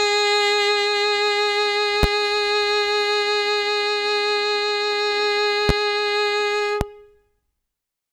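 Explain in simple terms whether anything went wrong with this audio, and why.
Loud pops hit the music three times, at 2.03–2.06 s, 5.69–5.72 s and 6.81–6.84 s, each a single sharp thump well above the music. It's likely a sudden voltage jolt, such as a plug or switch. Unlike a dropout, the music keeps playing underneath.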